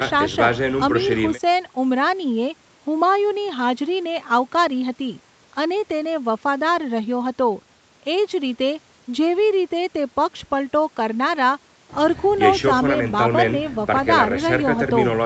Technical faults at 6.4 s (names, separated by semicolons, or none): none